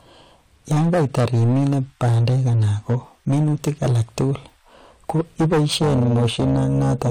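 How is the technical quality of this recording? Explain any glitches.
The technical quality is poor: the speech is heavily distorted from start to finish, and a second, separate fault takes over the last stretch.

Hard clipping runs throughout. The signal was driven about 13 dB past what the chain could pass, so roughly 15 percent of samples have their peaks sliced flat. Those flat tops generate high harmonics, giving every louder syllable a harsh, buzzy fuzz. Unlike soft saturation, the edge is gritty rather than warm.

Overlap-add ripple appears from 5.69 s to the end at 7.11 s. The speech was split into windowed frames and rejoined with overlaps that don't sum to constant gain, so the level swings by about 11 dB at roughly 300 Hz. The result is a metallic buzz with extra tones around each note. Clipping tracks loudness, but this ripple keeps a fixed rate whatever the level.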